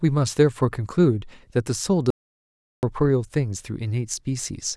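At 2.10 s the speech cuts off abruptly into silence, an audio dropout to silence lasting about 0.73 s, until it resumes mid-flow at 2.83 s. No room tone remains in the gap. The input signal was likely lost while the recording kept writing silence.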